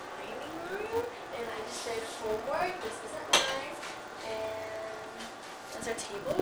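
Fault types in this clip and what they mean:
Filter restarted on every block: a steady buzz near 188 Hz rides along with the sound, rising and falling with its level, because the filter loses its state each block and starts from silence, which fits a 256-sample block.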